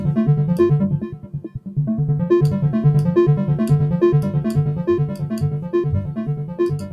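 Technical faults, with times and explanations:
Throughout: noise suppressor applied to music or sounds. A speech-tuned suppressor is treating the steady parts of this sound as noise, so its level swings by something like 15 dB. Sharp onsets get through, but held tones and decays keep getting pulled down, which makes it pump and thin out.
1.05–1.76 s, 5.08–5.27 s, 6.33–6.59 s, 6.77–6.93 s: sound cut by the noise suppressor. In each of these stretches the suppressor clamps down on sustained or fading material harder than elsewhere, with drops of about 13, 10, 12 and 11 dB. Tails get cut short and the sound sinks briefly.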